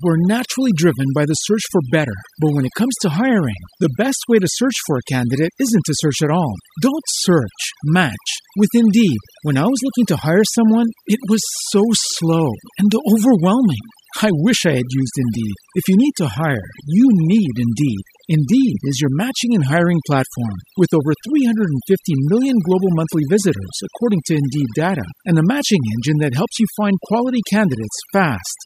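Noise reduction set far too strong runs across the whole speech recording, so overdone noise removal cuts any frequency band near its noise estimate almost to nothing. The background drops and breaks up into twinkling specks, while quieter parts of the voice vanish.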